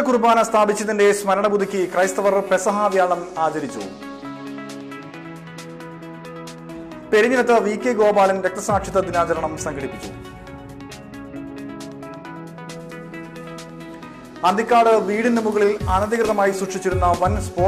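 From 15.76 to 16.42 s there are CD scratch ticks: six short ticks, the longest lasting only a millisecond or two, arriving at roughly nine per second. A blemish on the disc is destroying more data than error correction can rebuild, so each time that spot comes round the player patches or mutes the missing samples. Unlike random vinyl clicks, these ticks are evenly spaced, following the disc's rotation.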